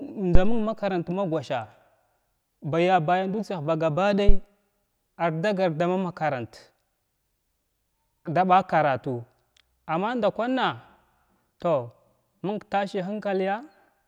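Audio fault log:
0.35–0.73 s, phantom power thump: a deep thud just before "ma gosha", peaking near about -3 dBFS and dying away over about 85 ms. A supply switching on a live input sends a voltage step through the coupling capacitors. The waveform shows one large offset swing easing back to centre, and the spectrogram shows a dark low-frequency blob at the bottom.
4.29–4.38 s, phantom power thump: a sharper knock right after "baya bayan dutsiyah ba", reaching about -2 dBFS and fading within about 21 ms. The cause is the same supply step. It appears as a brief, near-clipping waveform spike and a narrow low-end smear.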